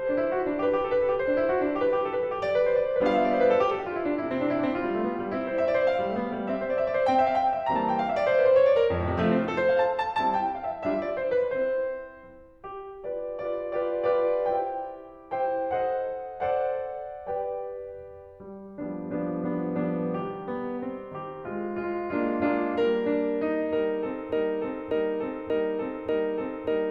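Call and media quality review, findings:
Broken-record loop, 24.32 s to end: 0.59 s fragment repeats exactly four times, likely stalled player resending last buffer; unlike echo, no decay.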